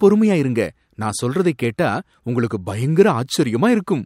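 Dropped samples at 3.43 s: a tiny stretch of the speech, a fraction of a millisecond, is missing, so the waveform leaps straight from one value to a later one. This is likely a brief stream interruption, and the jump is heard as one sharp click.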